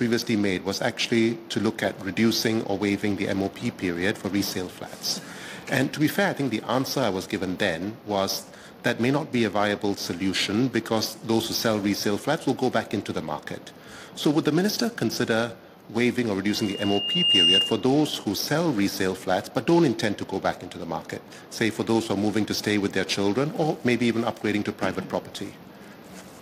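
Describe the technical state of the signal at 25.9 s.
Around 25.9 s the audio is intact, with no audible fault at that point.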